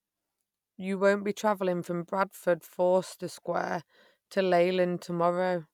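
No technical faults can be heard in this speech recording. Nothing breaks up, drops out or distorts at any point in the audio.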